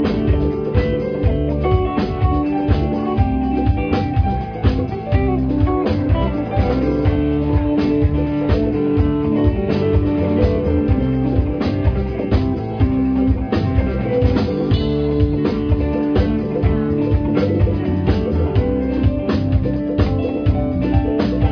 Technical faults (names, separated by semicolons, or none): none